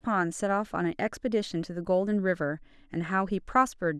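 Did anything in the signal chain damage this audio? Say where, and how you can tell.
No, nothing along the chain from capture to playback has left an audible mark on this speech. There is no point in the recording where the signal breaks, jumps or changes character in a way that would trace back to a particular stage.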